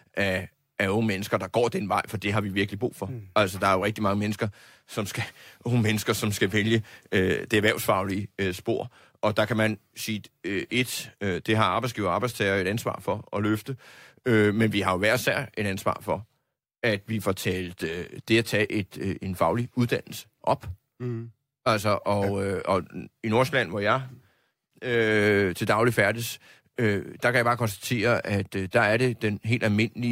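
A speech recording with nothing technically wrong with it.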